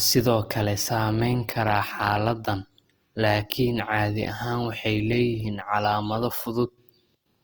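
Speech with plainly audible Opus compression throughout. The voice sounds grainy and rough because the encoder's music mode fills bit-starved bands with folded or noise-like content, the likely cause being a low-bitrate encode near 24 kbps. A spectrogram shows energy reaching about 20.3 kHz, but the harmonics look speckled and smeared rather than cut into holes.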